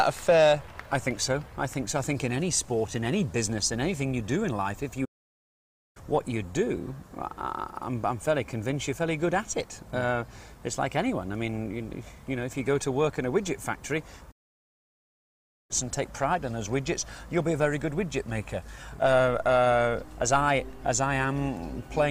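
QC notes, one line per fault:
5.05–5.97 s, playback stall: the sound cuts out mid-flow into about 0.91 s of silence, then resumes; likely the player ran short of data or its thread was blocked.
14.31–15.71 s, playback stall: a longer gap of about 1.38 s of dead silence interrupts the sound before it continues, likely from the player's output being starved of data.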